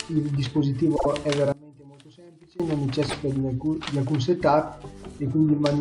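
From 0.95 to 1.06 s, repeated frames cause a stutter. A 48 ms block, which fits two 24 ms frames, plays twice more and adds 96 ms. The waveform shows identical copied segments. Between 1.52 and 2.60 s the level collapses by about 25 dB, leaving only a faint residue. The likely cause is one channel inverted, so the shared centre content cancels in mono. The waveform shrinks to a near-flat band and the spectrogram dims across all frequencies. From 3.09 to 3.14 s, a single 24 ms block repeats once more, adding 24 ms. It is a brief second stutter with one visibly duplicated slice.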